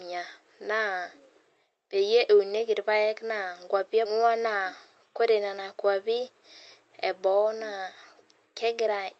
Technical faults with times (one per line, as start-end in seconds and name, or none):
4.05-4.07 skip ahead
4.15-5.30 jitter buffer speed-up